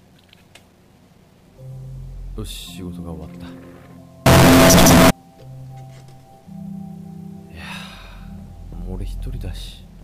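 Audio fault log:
4.26 to 5.10 s, signed and unsigned mixed up: The sound turns into very loud, harsh distortion. Quiet moments blare as loudly as the rest. The likely cause is 8-bit samples read with the wrong sign convention, so every zero crossing leaps across the full range.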